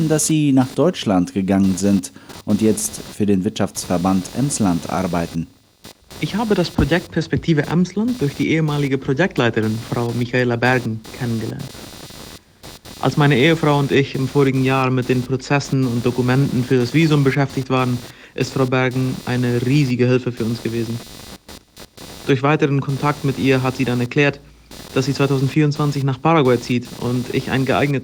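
Computer activity noise runs throughout. Processor or graphics load disturbs the shared audio ground, adding a buzzy chirping near 300 Hz, roughly 20 dB below the sound.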